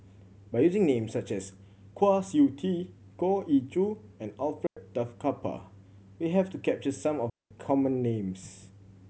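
Digital wireless dropouts hit this speech at 4.67–4.77 s and 7.30–7.51 s. The receiver lost too much data, so it muted for about 0.1 s and then 0.21 s, leaving clean near-silent holes with a very short fade and no noise burst on either side.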